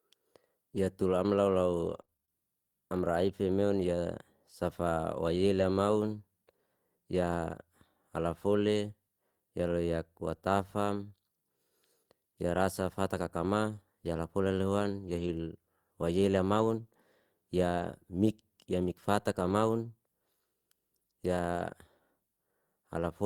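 Repeated packet loss (robotic sound) runs from 1.85 to 2.30 s, right after "tul amla". Packets kept going missing or arriving late, and each hole was bridged by stretching the preceding sound before the next dropout hit. The speech turns choppy and mechanical, with seven separate gaps, the longest 27 ms. About a third of that stretch is concealment rather than real signal, and around 70 ms of it is only roughly rebuilt.

Two spots have a lost packet rebuilt from error correction. The first is 15.00 to 15.29 s, just after "rasa fatata kama yalafolen". The second is 17.77 to 17.83 s, just before "mik ya mikfata". In both places the packets that followed carried low-bitrate backup copies, and the decoder played those copies, so nothing drops out. The first repair covers 160 ms, consistent with eight 20 ms frames, and the second covers 40 ms. Both sound coarser and noisier than the surrounding speech.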